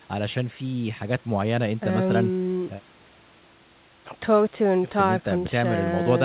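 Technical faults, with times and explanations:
Nothing stood out on listening.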